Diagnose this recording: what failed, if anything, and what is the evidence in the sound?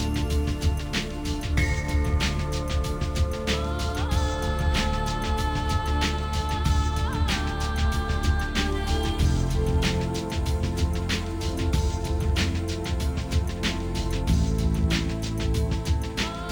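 The failure is at the sample-rate conversion stage, and it's there for the whole clip: imaging from linear upsampling. The top octave sounds dulled, and above 12 kHz there's a faint mirrored copy of the band running up to 24 kHz, roughly 30 dB down, which gives bright, hissy moments a light metallic shimmer. That points to a 24 kHz source doubled to 48 kHz by straight-line interpolation between samples, a filter too weak to remove the mirror image.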